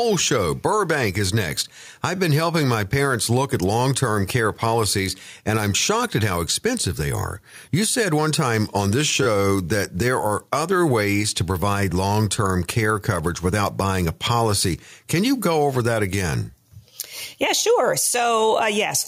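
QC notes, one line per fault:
2.16 to 2.18 s, repeated buffer: A 10 ms slice plays three times, which fits a 10 ms buffer replayed twice when new audio arrived late. The hard joins make a short buzzy click. No audio appears lost.
9.23 to 9.26 s, repeated buffer: A 10 ms slice repeats three extra times. The result is a slightly longer buzz.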